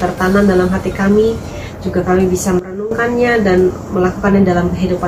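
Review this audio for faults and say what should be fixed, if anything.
At 2.59 s the level drops by about 13 dB in a single step and stays down until 2.91 s, when it returns just as abruptly. The sound and the background noise fall and rise together, which points to a sudden gain jump rather than a change at the source. The likely cause is a digital gain setting or bit shift applied from one sample to the next with no ramp. To prevent it, apply gain changes through a short smoothed ramp of a few milliseconds rather than switching them instantaneously.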